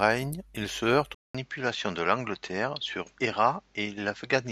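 Right after "il se heurte", at 1.15 s, the speech drops out for about 200 ms and comes back duller, with nothing above 7.6 kHz and a faint new hiss sitting well under it, at the same level. That's most likely the input switched to a poorer device, which holds to the end.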